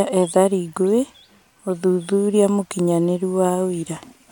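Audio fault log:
No faults detected in the speech clip.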